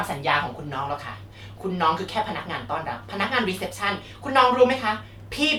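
Nothing in this bit of speech stands out as a technical fault; it just runs along without any glitches or dropouts to point to.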